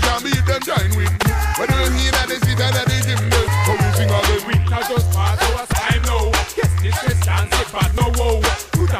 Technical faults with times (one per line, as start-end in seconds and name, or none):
1.23 audio missing between chunks
3.48 audio missing between chunks
7.98 audio missing between chunks